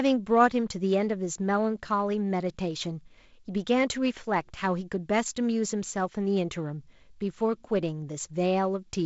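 No technical faults are audible.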